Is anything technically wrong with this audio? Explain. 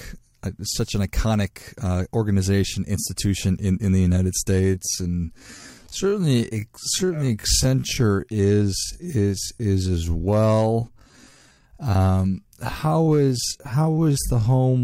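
Yes. From 4.58 s onward, a time-stretched section slows the speech to 0.58 times its pace at unchanged pitch, likely by repeating short pieces. It sounds dragging, and a spectrogram shows drawn-out syllables.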